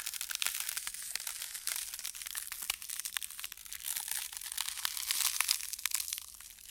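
At 1.02 s the audio suddenly slows and drops in pitch. Speed falls by about 5.8 percent, and pitch sinks by 104 cents, roughly a semitone. The shift lasts until 1.76 s, then snaps back to normal rate. This is a drift correction step. Clock-matching software likely changed the playback rate in one jump to rebalance its buffer. Speed and pitch move together, so the sound detunes flat and drags for that stretch.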